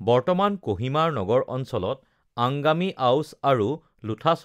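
Speech recording with no audible technical faults anywhere.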